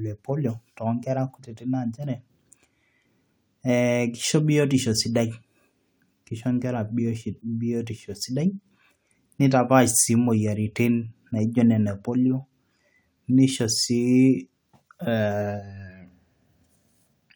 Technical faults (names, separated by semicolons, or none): none